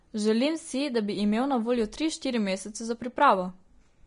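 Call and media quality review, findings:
Speech sounds hissy and grainy throughout. Nothing above 10.6 kHz. Likely Vorbis compression at low quality, fitting roughly 34 kbps: coarse treble quantisation turns detail into noise.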